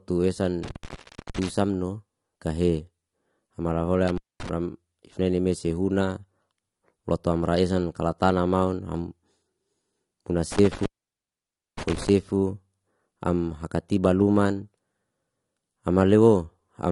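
Across the whole speech clip the top end is missing: nothing sits above 11.2 kHz, and the sound is dull and smeared, with a warbling, fizzy edge on sibilants. This is plainly audible damage from AAC compression, likely AAC-LC at a low bitrate, consistent with roughly 32 kbps. The encoder discards high bands and coarsely quantises the rest. A spectrogram shows a hard ceiling at 11.2 kHz.

An intermittent contact then interrupts the signal three times, as a loose connection briefly opens. Between 0.63 and 1.49 s the sound drops out for about 0.46 s. Between 4.07 and 4.49 s it drops for about 0.23 s. Between 10.52 and 12.09 s it drops for about 0.92 s. Each gap has crackle at its edges and leaves faint hiss. A waveform shows near-flat gaps bounded by spiky bursts, and a spectrogram shows vertical clicks framing dark bands.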